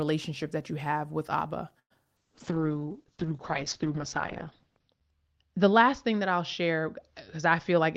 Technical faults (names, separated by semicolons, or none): call audio freeze; short concealed packet loss; call bitrate drop